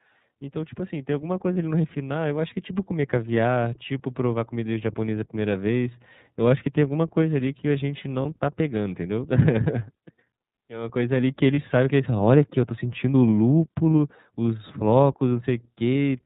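Throughout, the speech sounds dull, slightly rough and synthetic, with nothing above 4 kHz. This plainly audible damage comes from the iLBC codec, and the sound fits 13.33 kbps with 30 ms frames.

From 0.51 to 3.39 s, the voice and background swell together by about 9 dB. This is automatic gain rising: the control judged the input too quiet and gradually lifted it.

At 1.53, 8.22 and 11.54 s, a brief held, buzzy vowel replaces the speech for about 30 ms. These are lost iLBC frames, each consistent with a single dropped frame. The decoder filled each gap by repeating the last pitch cycle with noise, and the voice recovered almost at once.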